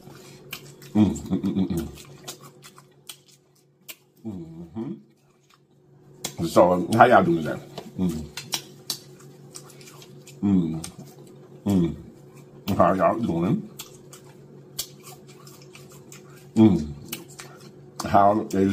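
No technical faults are audible.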